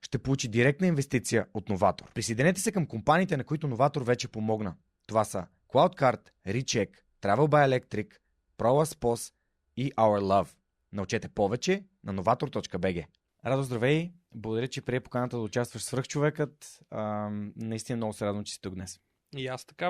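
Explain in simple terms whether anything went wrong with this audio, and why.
Nothing seems to have gone wrong here: the speech recording holds steady the whole way, with nothing that stands out as a problem to the ear.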